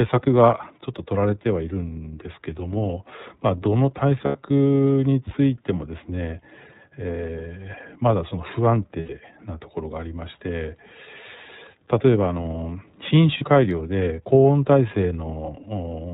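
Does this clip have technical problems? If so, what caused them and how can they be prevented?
Yes. The whole clip carries iLBC codec coloration: the speech is band-limited with nothing above 4 kHz, and it has a plainly audible rough, slightly synthetic edge. That comes from iLBC modelling the excitation of each frame independently at a low bitrate. The character fits the 13.33 kbit/s mode with 30 ms frames. To prevent it, negotiate a wideband codec such as Opus or G.722 wherever both endpoints support one.

There are also lost iLBC frames at 4.25–4.36 s, 9.00–9.10 s and 13.38–13.42 s. At each point the speech briefly turns into a held, faintly buzzy vowel, because the decoder covers the missing audio by repeating the last pitch cycle mixed with noise. The first two gaps last about 90 ms, which fits three lost 30 ms frames. The third lasts about 30 ms, or a single frame. Since iLBC frames decode independently, normal speech returns immediately after each gap. 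To prevent it, reduce packet loss on the network path with QoS prioritisation, a better link or a larger jitter buffer, or add forward error correction or redundant packets.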